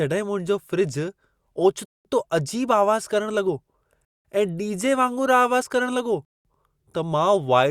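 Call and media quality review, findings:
Silent holes, 200 ms each, at 1.85, 4.05 and 6.25 s; gap between chunks, 2 s chunks probably padded by codec or joined late by player, no audio lost.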